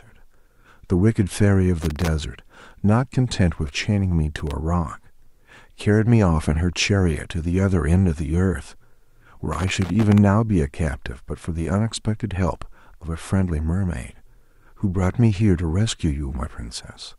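Irregular bursts of crackle and scratching chop the speech at 1.82–2.08 s, 4.36–4.51 s and 9.53–10.18 s: loose connector crackle from a worn contact making and breaking.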